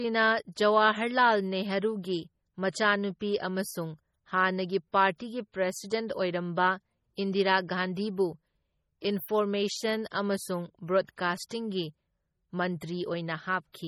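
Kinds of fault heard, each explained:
MP3 compression: The speech sounds heavily watery and swirly throughout, with nothing above 19.8 kHz. This is likely MP3 coding with too few bits, fitting a bitrate near 32 kbps, so weak frequency lines are zeroed and flicker on and off between frames.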